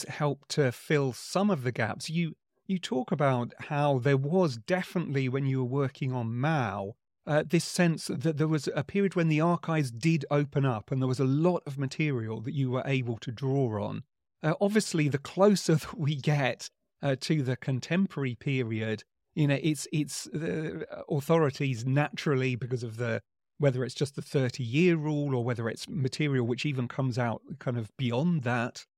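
No technical faults can be heard anywhere in the recording; the signal stays continuous and steady throughout.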